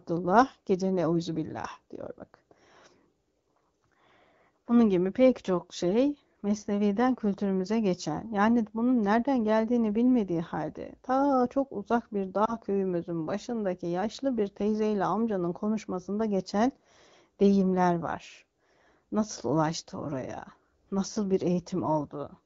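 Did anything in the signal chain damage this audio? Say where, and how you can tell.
Yes. Lost AMR speech frames on the radio link, around 12.45 to 12.53 s, between "ta çok uzak bir" and "köyümüzün başındaki yaşlı bir". The brief dip fits one lost 20 ms frame that the decoder concealed by repeating earlier parameters at reduced gain. On a spectrogram the harmonics look briefly smeared, with a dimmed patch in the waveform.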